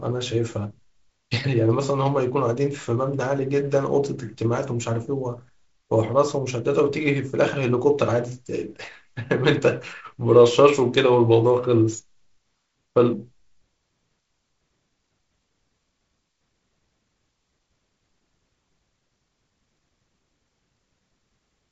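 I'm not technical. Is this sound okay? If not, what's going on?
Yes, this sound is okay, and nothing is going wrong in it.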